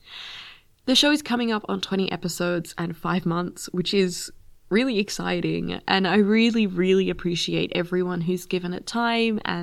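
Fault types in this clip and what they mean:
Nothing stood out on listening to the speech in this recording.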